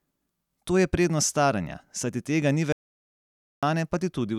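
Speech clip with an audio dropout to silence from 2.72 to 3.63 s. About 0.9 s drops to silence. A lost input link is the likely cause.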